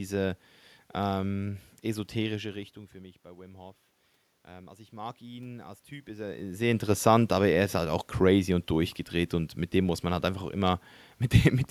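From 4.45 to 6.81 s there's automatic gain rising: the input dropped by about 20 dB, so the gain control slowly pushed its level up by about 5 dB. The voice and the room noise swell together across those couple of seconds, separate from the talker shifting position around 6 s.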